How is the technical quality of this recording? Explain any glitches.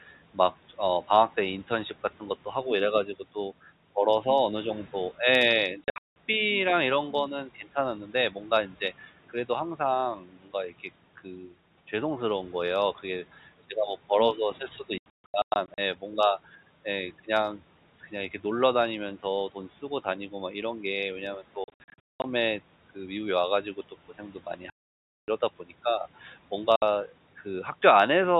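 The recording is hurt by repeated dropouts and one brief swallowed stretch. It is telephone-band G.711 A-law audio, with faint room noise about 25 dB below the speech.

Packet loss filled with silence occurs at 5.84–6.16, 14.98–15.78, 21.64–22.24, 24.7–25.28 and 26.76–26.82 s. Lost packets were replaced with silence. The holes fit 20 ms packets, and runs reach up to 580 ms. The speech cuts out abruptly.

Speech cut by the noise suppressor occurs at 10.19–10.5 s. The suppressor mistook speech for noise and lowered it by up to about 12 dB for roughly a fifth of a second. That part sounds faint and swallowed.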